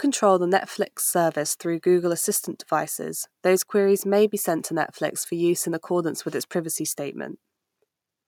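Listening through the speech, nothing stood out as a technical problem at any point.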